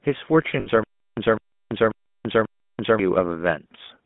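A buzzy, gravelly roughness colours the speech from start to finish, and the band is held to roughly 150 Hz to 3.5 kHz. This is the GSM full-rate codec, which points to a 13 kbps rate. It rebuilds the voice from a vocal-tract model fed by sparse, regularly spaced pulses, so fine detail turns coarse and hard.

From 0.60 to 0.69 s the sound freezes into a brief rough, metallic ring. These are lost GSM frames. The decoder covered the 60 ms gap, which fits three 20 ms frames, by repeating the last good frame's settings.

Between 0.83 and 2.99 s a short burst of about 0.2 s plays four times at an even 0.54 s pace, with about 0.34 s of dead digital silence after each. This is stutter with silent gaps, likely a stalled stream replaying its last fragment at each retry and then running empty, so the audio due in that span is lost.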